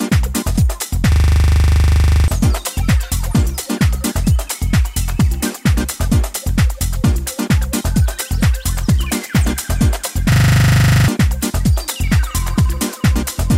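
System hang loop at 1.12 to 2.28 s and again at 10.32 to 11.08 s: the system stalled while the sound hardware kept replaying one 40 ms buffer, producing a rigid 25 Hz buzzing stutter. About a second, then roughly 0.7 s, of audio is lost.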